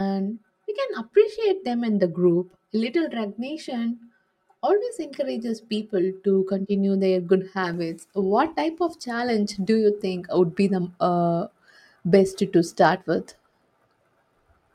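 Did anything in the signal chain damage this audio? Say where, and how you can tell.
Yes. Channel delay (comb filtering) colours the speech from 0.00 to 7.74 s. One channel runs about 5 ms behind the other before a mono sum in the buffer or mixdown stage, so cancellations land at evenly spaced notches from roughly 100 Hz upward, sounding hollow and phasey.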